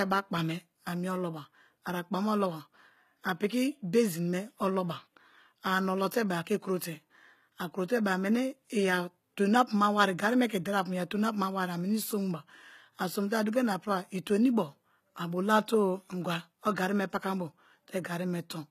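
Speech throughout carries plainly audible HE-AAC compression damage, likely from low-bitrate encoding around 20 kbps. Treble rebuilt by band replication makes s sounds gritty and metallic. A spectrogram shows copied, smeared upper bands and a hard ceiling at 14.9 kHz.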